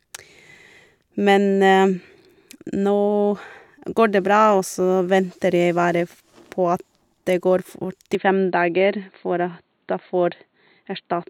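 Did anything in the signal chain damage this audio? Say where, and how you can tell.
Yes. From 8.15 s to the end at 11.29 s, the speech turns abruptly dull and boxy, with nothing above 4.4 kHz, while its loudness stays about the same. There is no gap at the transition, just a sudden change in tone, and a faint new noise floor sits far below the speech. This is likely an input switched to a poorer device at the driver level, such as another microphone or a headset's narrowband call profile.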